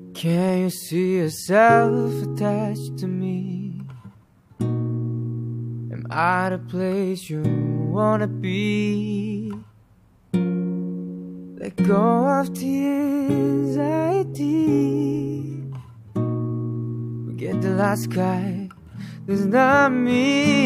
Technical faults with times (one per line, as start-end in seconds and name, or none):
none